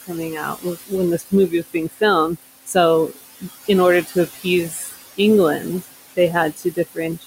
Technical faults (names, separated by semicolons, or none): noise suppressor artifacts; speech cut by the noise suppressor